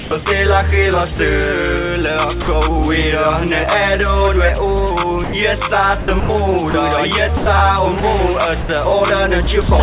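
From 0 to 0.26 s the sound is choppy, with about 140 ms swapped for a synthetic hiss. This is likely sound chopped by the voice detector, which toggled sending on and off and let comfort noise fill the gaps. At 1.16–1.19 s and 2.42–2.48 s the sound briefly gives way to steady noise, for 30 ms and 60 ms. Each is likely sound dropped by the voice detector, which mistook quieter material for background and stopped sending. From 5.24 to 9.68 s the choppiness returns, with about 570 ms in total replaced by comfort noise, again likely the voice detector chopping the sound. Through all of it the hiss stays band-limited, with nothing above 4 kHz, which fits a G.711 A-law call path.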